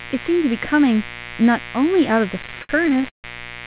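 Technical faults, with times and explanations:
Throughout, mains buzz: a steady, raspy buzz sits under the speech at roughly 15 dB below it. Its 60 Hz fundamental carries a dense stack of harmonics, which is why it rasps rather than hums. Those harmonics climb until the band ends at 4 kHz, a ceiling that fits narrowband G.711 A-law at 64 kbps. The rasp comes from sharp switching spikes, twice per mains cycle, leaking in through a dimmer, a rectifier or a missing shield.
2.39 to 3.25 s, repeated stalls (stutter): the speech drags and catches 14 times, with the longest hold lasting 149 ms. About 329 ms of held sound is spliced in, roughly 38% of that span, yet nothing is actually lost. Packets arrived late or slower than playback, so the jitter buffer kept running dry. Each time, the receiver stretched the last sound, fading it during the longer waits, until fresh audio arrived.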